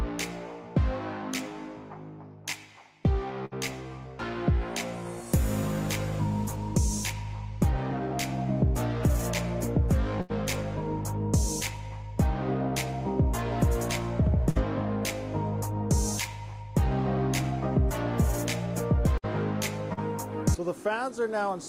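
Bursts of packet loss at 3.45, 10.21, 14.49 and 19.18 s each drop 60 to 80 ms. The receiver extends and fades the last sound, which becomes a held buzz or fading hiss, then resumes past the gap. At 19.93 s, a short concealed packet loss hides about 40 ms, and the filled-in audio blends back as a brief smear.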